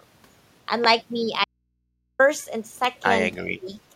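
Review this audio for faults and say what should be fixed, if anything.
Two loud pops sit on top of the speech, one from 0.84 to 0.87 s peaking about 15 dB above the signal, and one from 2.85 to 2.87 s at about 10 dB above it. The speech carries on underneath each one. A voltage pulse, likely from a connector, switch or static discharge, was added to the signal path. On a waveform each shows as a tall, narrow spike. On a spectrogram each is a thin vertical stripe spanning the full frequency range. To prevent it, secure cables and switch devices only while the channel is muted.

An audio dropout to a faint residue runs from 1.44 to 2.19 s, about 750 ms long. The speech cuts off abruptly and returns just as suddenly. In between, only mains hum remains, about 50 dB below the speech. The wanted signal was likely lost upstream, for example at an open input, while the following stages stayed live. 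The waveform shows a near-flat stretch with sharp edges. The spectrogram shows a blank block crossed only by thin low-frequency hum lines. To prevent it, check the input connection and buffering so the signal feed cannot break mid-stream.

Speech suppressed in double talk appears from 3.37 to 3.68 s, lasting roughly 300 ms. The level dips by up to about 20 dB. The echo canceller likely could not separate its own talker from the loudspeaker echo while both were active, and turned the loudspeaker-side voice down. On the waveform the envelope sags in that span. On the spectrogram the energy fades there. To prevent it, tune the echo canceller's double-talk detection so it keeps near-end speech while the far end is active.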